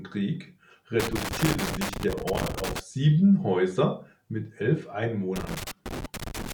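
Loose connector crackle appears from 1.00 to 2.80 s and again from 5.36 to 6.52 s, just after "mit elf". A worn or dirty contact keeps making and breaking, chopping the speech into irregular bursts of scratchy crackle.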